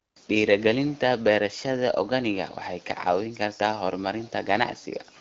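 No faults are audible; the speech carries only light wideband-codec colouring, consistent with AMR-WB at around 12.65 kbit/s.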